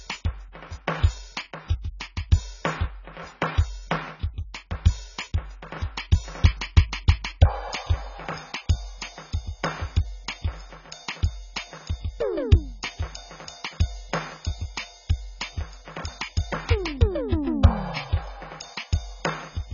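AAC compression runs through the whole piece of music. Nothing sounds above 7 kHz, and heavy quantisation damage leaves the music dull, smeared and warbling. The likely cause is AAC-LC coding at a very low bitrate, around 16 kbps, cutting bands to save data.

Pre-echo appears from 1.82 to 1.85 s, a short hiss spreading about 29 ms ahead of a sharp attack. The codec spread noise meant for the loud onset across its whole block, so the hiss fills the quiet moment before it and softens the hit.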